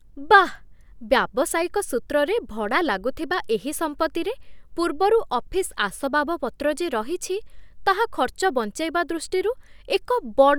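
Speech with no audible faults.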